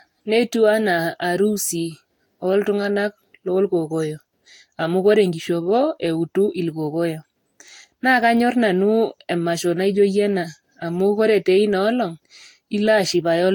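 Throughout the speech, generation loss makes the sound swirly, smeared and hollow, with blurred attacks. A spectrogram shows patchy holes and nothing above 19.2 kHz. This likely comes from about four successive Vorbis encodes near 65 kbit/s, each requantising the audio afresh.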